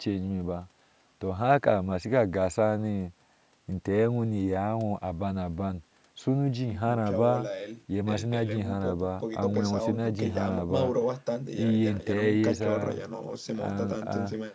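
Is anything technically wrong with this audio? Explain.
No, there are no faults.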